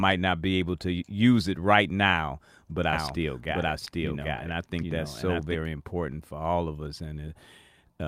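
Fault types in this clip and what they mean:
Doubled audio track: From 2.93 to 5.55 s the speech is heard twice, with a second full-band copy trailing by roughly 0.7 s at about the same level. It starts and stops abruptly and has no room colour or decay, likely from two out-of-step copies mixed together.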